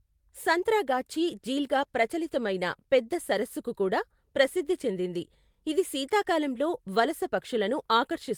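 No technical faults are audible.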